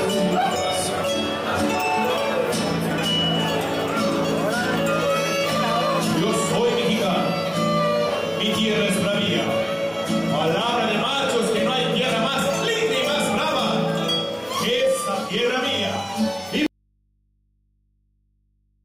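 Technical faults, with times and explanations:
16.66 s to the end, audio dropout to a faint residue: the sound cuts off abruptly mid-flow and never returns, leaving only a low mains hum roughly 45 dB below the earlier level. The break is instant rather than a fade or a natural pause, and the hum shows the path after the break stayed live. The likely cause is the source feed being lost while the downstream input remained open, picking up hum.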